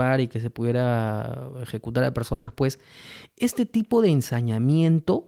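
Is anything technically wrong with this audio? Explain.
Yes. At 2.33 to 2.49 s, just after "se pudiera ejecutar a", the speech stops and the last sound is stretched into a steady buzz or hiss that fades over about 140 ms, then cuts to "pues este tipo de" with the speech in between gone. This is a burst of packet loss: roughly 140 ms of audio never arrived in time, so the receiver filled the gap by repeating and fading the final sound before skipping ahead.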